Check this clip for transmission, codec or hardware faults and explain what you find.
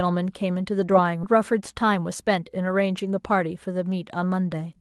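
Two faults stand out in this speech clip, both from how the audio was delivered rather than the Opus codec the call ran through.

The first is a skip ahead at about 1.23 to 1.25 s. Roughly a second of audio was thrown away, either lost in transit or dumped when the buffer overflowed with later packets already queued. Nothing fills the hole, so the talker jumps forward mid-flow and the two edges butt together almost seamlessly, with a chunk of speech simply gone.

Shortly after, from about 1.83 to 2.27 s, there's a jitter buffer speed-up. The buffer was sitting on more audio than its target, so the receiver trimmed out short, pitch-period-sized slices over and over, around 50 ms in all. That runs the speech at about 111% speed while the pitch stays put, so this stretch sounds a bit rushed compared with its surroundings.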